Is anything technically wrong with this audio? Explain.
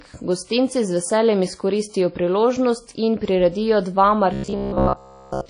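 Yes, there are two faults.

Throughout, the speech has a washy, ringing quality with hiss that swells and fades with the voice. This is likely WMA compression at a low bitrate. Long transform blocks smear quantisation noise over tens of milliseconds and drop weak components. The result is a continuous smear rather than isolated clicks or gaps.

From 4.33 s to the end at 5.49 s, the voice becomes a rigid metallic buzz pitched near 66.8 Hz. This is robotic sound from repeated short buffers. Essentially all of this stretch is a segment of about 15 ms replayed over and over, likely because fresh audio arrived too slowly. Unlike dropouts, there are no silences.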